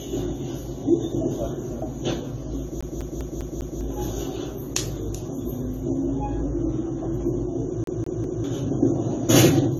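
From start to end the audio has nothing above 14 kHz and a layered, smeared coarseness: the different codecs' artefacts sit on top of one another. This is likely transcoding between lossy codecs, which fits a low-rate AAC-LC encode re-encoded to Vorbis at a similar rate.

From 2.81 to 3.81 s, and again from 7.84 to 8.44 s, the CD is stuck on one turn. A scratch keeps throwing the laser back, so a 200 ms slice repeats five and then three times. Each jump has a brief mute, giving an even, rapid stutter.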